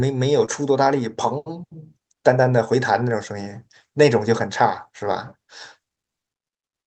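Speech, with one short concealed packet loss at 0.45 s. About 20 ms never arrived in time. The receiver extended the preceding sound, leaving a brief smear.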